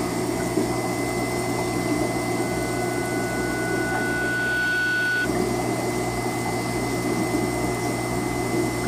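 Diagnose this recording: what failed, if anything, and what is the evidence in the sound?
What failed is the analogue side: a classic loudspeaker feedback squeal. From 2.38 s a steady 1.5 kHz tone swells over about two seconds until it's roughly as loud as the programme, then stops at 5.29 s. The mic is hearing its own speaker, and loop gain at 1.5 kHz tipped past one.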